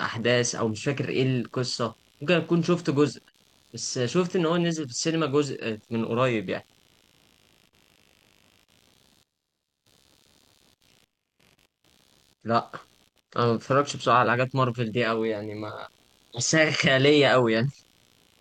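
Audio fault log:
throughout, computer activity noise: a faint buzzing chirp pulsing around 70 times per second, roughly 40 dB below the speech, as processor or graphics load shifts the shared audio ground; unlike steady mains hum, it follows the computer's activity rather than a fixed tone.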